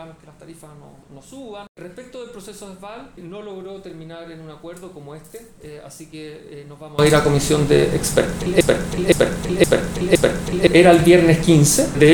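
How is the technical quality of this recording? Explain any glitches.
The recording has two clear faults.

From 0 to 6.99 s the sound drops by about 24 dB and turns faint. The likely cause is one channel inverted, so the shared centre cancels when the channels are summed to mono. Unlike a plain level drop, the faint, centreless quality gives it away.

From 8.61 to 10.67 s a 0.52 s fragment plays four times back to back, and the audio that should have filled that span is missing. This broken-record loop likely comes from a stalled player or stream resending its last fragment. Exact repetition with lost material sets it apart from an echo.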